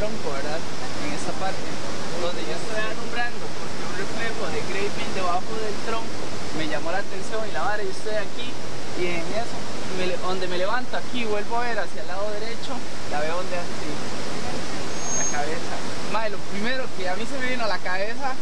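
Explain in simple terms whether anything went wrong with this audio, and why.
From 14.88 to 15.49 s a thin, piercing whistle at about 6.5 kHz swells up over roughly a third of a second and ends up a little louder than the sound itself. That is a loudspeaker feedback squeal: a microphone picked up the speaker it was feeding, and that one pitch looped round and grew on its own.

Throughout the clip there is also a DC offset. You can't hear it, but the whole waveform sits shifted away from the centre line by a steady amount. That wastes room the recording could have used before clipping, and it shows up as constant energy at the very lowest frequencies.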